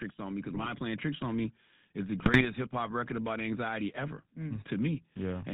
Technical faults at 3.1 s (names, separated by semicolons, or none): GSM full-rate codec